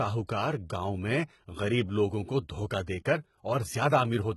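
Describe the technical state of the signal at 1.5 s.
At 1.5 s the speech has likely passed through HE-AAC compression at a very low bitrate, consistent with roughly 16 kbps, and the damage runs through the whole clip. The treble is rebuilt from copied lower bands rather than coded, so s sounds turn gritty and metallic, and nothing remains above 11.8 kHz.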